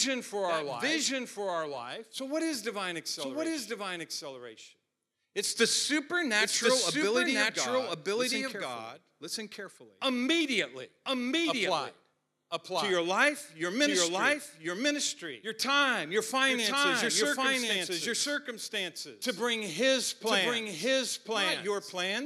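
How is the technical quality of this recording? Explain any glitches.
The recording has one persistent fault. Throughout, a doubled audio track is heard: the speech repeats about a second later at roughly equal level, dry and full-band, likely from a second, slower capture path mixed in.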